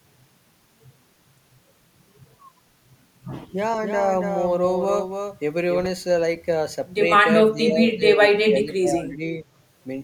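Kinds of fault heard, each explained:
doubled audio track: A slower second path likely mixes the speech in twice; from 3.82 to 5.86 s a copy trails about 300 ms behind, somewhat quieter.
speech suppressed in double talk: The echo canceller likely mistook the talker for echo during overlapping talk, so between 7.53 and 9.22 s the speech dips by up to about 25 dB.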